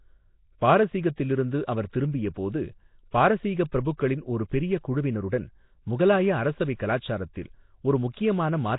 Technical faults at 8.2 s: Nellymoser compression

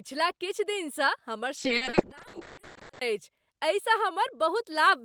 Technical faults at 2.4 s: call bitrate drop

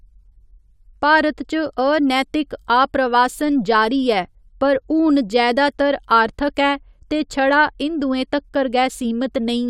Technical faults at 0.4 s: none

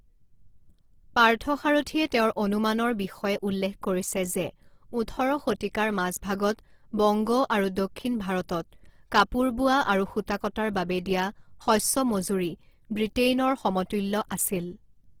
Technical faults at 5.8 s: Opus compression

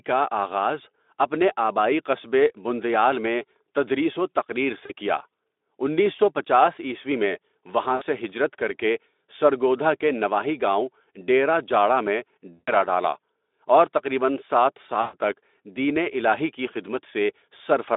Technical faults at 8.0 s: VoIP packet loss concealed by the speech codec

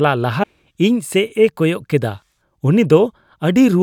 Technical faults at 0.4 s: damaged data in a compressed stream

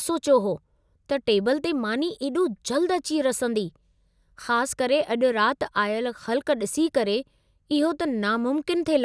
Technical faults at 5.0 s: none

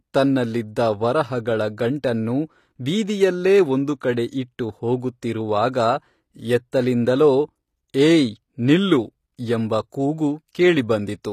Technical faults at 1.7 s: HE-AAC compression

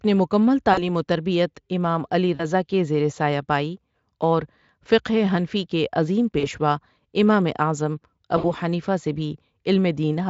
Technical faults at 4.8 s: none

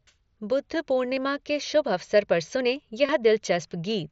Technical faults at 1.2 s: concealed Bluetooth headset packet loss

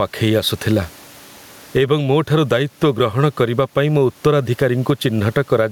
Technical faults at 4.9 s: gain pumping

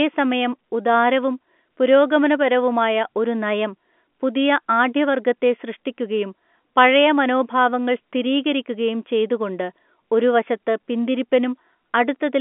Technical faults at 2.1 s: none

